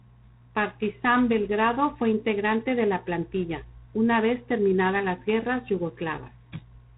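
Throughout the speech, G.726 ADPCM coding leaves nothing above 3.9 kHz and a harsh, rasping hiss that rises and falls with the speech level. The coarse quantisation of each sample's prediction error fits the 24 kbit/s mode.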